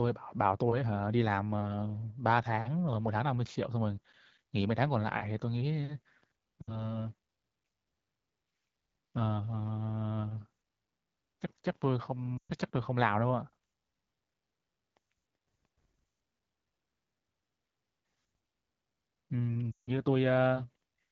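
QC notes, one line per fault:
6.62 to 6.89 s, 12.38 to 12.52 s and 19.72 to 19.91 s: lost AMR speech frames. About 60, 120 and 160 ms of speech fail to arrive, which fits runs of roughly three, six and eight frames. Rather than cutting abruptly, unlike a packet dropout or hard mute, the AMR-WB decoder (at a rate that fits 12.65 kbit/s) holds the last pitch and vocal tract shape while lowering gain. The sound drops to near silence within two frames, then resumes briefly weak and rough.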